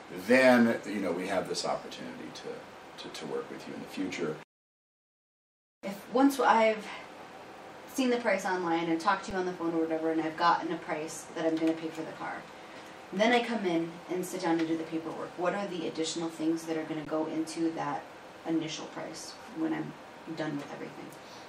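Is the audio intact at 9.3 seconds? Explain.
No. At 9.30 s there is an underrun with held sample: the output buffer ran empty, so the converter held its last value for about 6.7 ms, dropping roughly 7 ms of audio. The waveform shows a flat line, usually off zero, and the spectrogram a brief blank strip.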